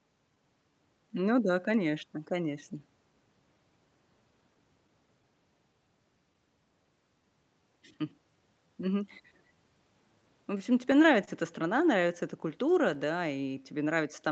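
Right through the speech there's clock drift between sender and receiver: the sender's clock runs roughly 3% slow, so the receiver's buffer keeps running short and has to stretch things out. From 0.71 to 14.11 s you get repeated timing corrections, with little repeated slivers that play things at about 98% speed and add something like 0.3 s overall. It comes across as a faintly dragging, uneven tempo with the odd hiccup. Between 4.54 and 5.25 s there are scattered short gaps, about three tiny holes of up to around 10 ms. Each is bridged by carrying the last sound on, so you hear only slight ticks or smears. From 10.58 to 11.29 s the scattered short gaps come back, again about three, but the longest is around 30 ms, so the smear there is a bit longer.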